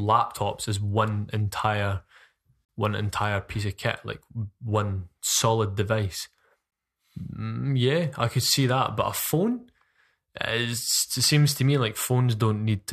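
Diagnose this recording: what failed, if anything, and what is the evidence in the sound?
Gap between stream segments, at the playback stage: hard-edged silences in the speech from 2.65 to 2.69 s (39 ms) and at 6.71 s (15 ms), about 4 s apart, which fits 4-second segments. The player pads mismatched time stamps with silence. Unlike a dropout, nothing is lost; the timeline just stretches.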